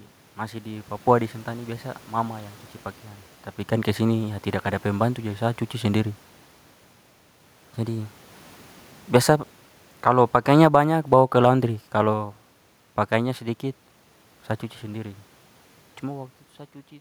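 Two devices in the chain likely ran on separate, unsynchronised clocks, so from 0.16 s to 16.80 s a single sample slips roughly every 0.2 s, which fits a mismatch near 100 parts per million. This gives around seventy faint, evenly spaced clock slip clicks, about five per second.

From 9.92 s to 12.36 s the automatic gain control judged the input too loud, or its background noise too strong, and steadily pulled its gain down by about 6 dB. This automatic gain falling makes the speech sink gradually over those seconds, with the room background dropping along with it.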